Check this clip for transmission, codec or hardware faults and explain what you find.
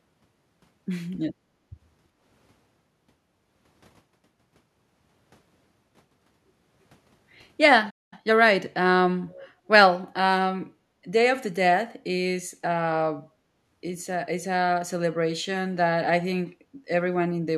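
Four kinds of fault are audible in this speech clip: repeated background gating, a short playback stall, a burst of time-compressed catch-up after it, and a brief echo leak.

Background gated by the echo canceller occurs at 1.31–1.69 s, 9.53–9.69 s, 13.22–13.62 s and 16.65–16.86 s. The room sound sinks by about 13 to 14 dB while far-end audio plays, then returns.

A playback stall cuts the sound at 7.90 s for about 0.22 s, leaving silence until 8.13 s. The player likely ran dry of data or had its thread blocked. The sound resumes rather than being masked by noise or a repeated fragment, which distinguishes it from packet-loss concealment.

Time-compressed catch-up follows immediately, from 8.13 to 8.33 s, when the audio runs at twice normal speed to clear the backlog. Pitch stays natural, so it sounds hurried rather than chipmunk-like, unlike a resampling error.

An echo leak appears at 9.27–9.46 s as a faint, delayed copy of the voice arriving 326 ms late, roughly 25 dB below the speech. 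The likely cause is a loudspeaker on one side whose canceller let some pickup through. The long delay and separate copy distinguish it from room reverberation.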